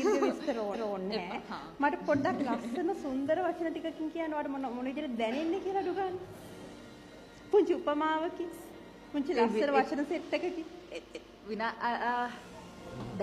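Repeated frames: twice, a run of compressed frames reached the decoder a second time, so the same stretch replays as a stutter. At 0.70 s a 232 ms block plays again; at 11.10 s a 186 ms block repeats, each lengthening the audio by that amount.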